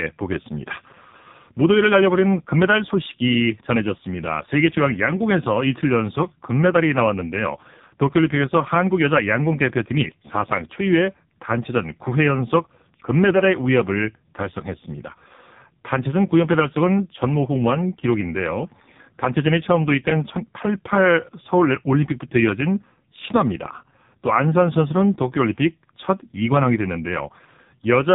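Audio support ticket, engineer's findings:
Buzzy, synthetic speech, boxy, nothing above 3.8 kHz, start to end. AMR narrowband mobile codec: 8 kHz vocal-tract model rebuilding each 20 ms frame from few pulses. Heavy artefacts fit a low AMR-NB mode, near 5.15 kbps.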